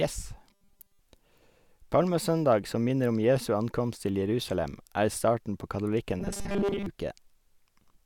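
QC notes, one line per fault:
0.50–1.00 s and 6.20–6.86 s, robotic sound from repeated short buffers: the speech collapses into a rigid metallic buzz at 200 Hz, likely from about 5 ms of audio being replayed over most of each span, unlike a stutter, which repeats audibly longer pieces.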